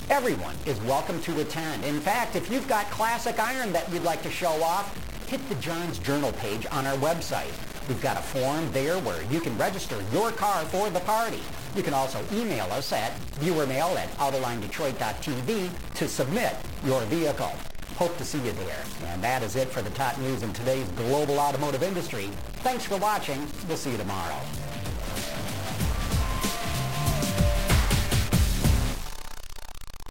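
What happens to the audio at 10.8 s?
At 10.8 s, as throughout the clip, a harsh, buzzy distortion persists, likely from a stuck bit offsetting about half the samples by a step of about -30 dBFS. The waveform shows small square jumps; a spectrogram shows broadband noise, even in quiet gaps.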